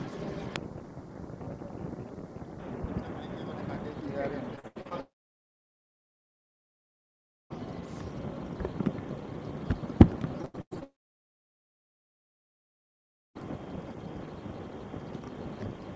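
From 4.56 to 4.93 s the sound turns choppy, breaking up five times with chunks missing. This is repeated packet loss, giving a robotic sound. Packets kept arriving late or not at all, and each hole, the longest 79 ms, was patched by stretching the last good audio. Roughly half of that stretch is filled-in sound rather than real signal.

Almost immediately after, at 5.01 s, the audio cuts out and stays nearly silent until 7.52 s, about 2.5 s of nothing before the sound resumes with that section simply gone. This is most likely a long network dropout, with the receiver briefly extending the last sound and then falling to silence.

The pattern repeats. Between 10.42 and 10.83 s comes another burst of robotic, stuttering packet loss, this time six gaps with the longest 97 ms, and over half the span concealed. At 10.83 s what is likely a second long network dropout takes hold, leaving near-silence until 13.37 s, again about 2.5 s lost outright.

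Throughout, the audio carries nothing above 8 kHz, which fits the G.722 codec of the call path.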